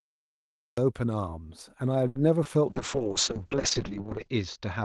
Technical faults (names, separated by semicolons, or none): cut-off start; short stall from a late packet; short concealed packet loss; call bitrate drop